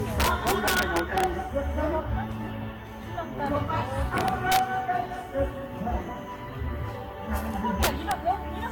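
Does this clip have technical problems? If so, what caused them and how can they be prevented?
Yes. Throughout, the sound is swirly, smeared and hollow, with blurred attacks and nothing above 19.3 kHz. This is likely generation loss: about seven successive lossy encodes, consistent with Vorbis near 70 kbit/s, each requantising on a shifted frame grid so noise and spectral holes accumulate. Prevent it by keeping a lossless master and encoding only once.

Violent, sharp cracks on loud passages at 0.20–1.24 s, 4.18–4.59 s and 7.83–8.12 s are integer overflow. Peaks driven about 5, 2 and 6 dB past full scale wrapped to the opposite sign instead of limiting, flipping across the whole range. Prevent it with saturating arithmetic or headroom before gain stages.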